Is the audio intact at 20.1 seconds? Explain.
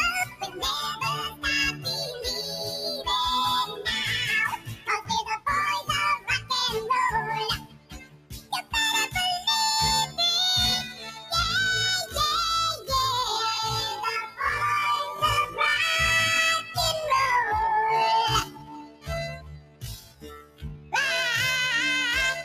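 No. Sound cut by the noise suppressor, from 18.44 to 20.94 s: judging this sound to be noise, it dips by up to about 17 dB, sinking steady parts and clipping decays. Throughout, a noise suppressor applied to music or sounds is turning down sustained tones and tails, making the level pump and swing by around 10 dB.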